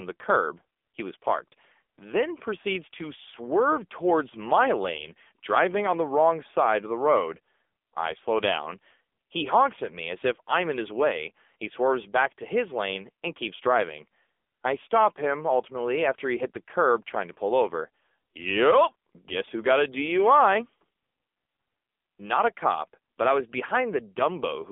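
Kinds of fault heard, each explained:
AMR narrowband mobile codec: The speech is rebuilt from a vocal-tract model driven by sparse pulses. Nothing above 3.6 kHz survives, and the band spans 250 Hz to 3.5 kHz. Heavy damage makes it buzzy and synthetic, which fits a low 6.7 kbps mode.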